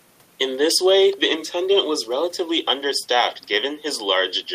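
No technical faults can be heard anywhere in this recording.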